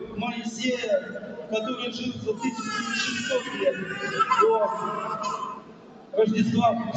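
A noise suppressor built for speech was left on for sounds throughout, treating steady parts as noise, so levels pump and thin by around 15 dB.

Sound cut by the noise suppressor happens at 0.37–0.6 s (about 6 dB), 1.01–1.53 s (about 8 dB), 1.94–2.61 s (about 7 dB) and 5.55–6.13 s (about 9 dB). Each time, held or fading sound sinks while sharper onsets survive.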